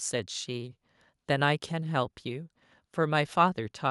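No technical faults can be heard in this recording.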